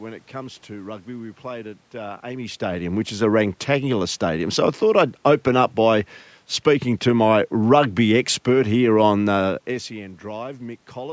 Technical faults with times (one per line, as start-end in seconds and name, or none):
none